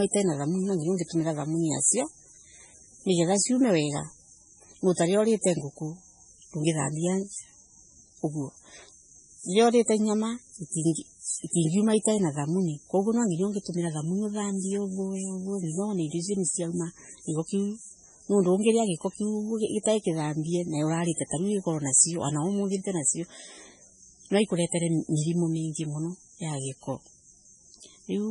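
Throughout, the speech is dull with nothing above 10.5 kHz, and weak detail swirls and chirps around sibilants, heavy damage that likely comes from low-bitrate MP3 compression.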